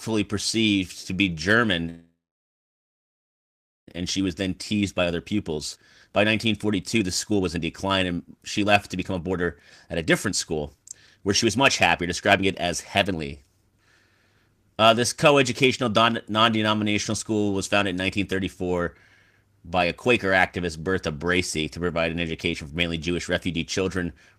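Speech with a call audio freeze from 1.89 to 3.89 s: the sound is held briefly, then goes silent for about 1.74 s before resuming where it left off, so nothing is lost but about 2 s of delay is added, likely from delayed packets emptying the jitter buffer. Jitter buffer speed-up follows as the receiver trims pitch periods to shed that delay. From 4.01 to 11.58 s the speech runs at 121% speed at unchanged pitch, removing roughly 1.5 s. Shorter bursts follow at 12.0–12.65 s (119%) and 13.05–14.49 s (115%), so the delivery sounds hurried.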